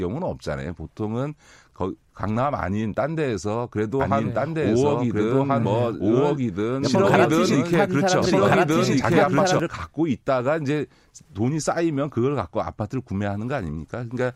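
From 4.0 to 9.6 s a doubled audio track runs, a second equally loud copy trailing about 1.5 s behind. It is likely a slower duplicate capture path. Unlike echo, it has no decay and cuts in abruptly.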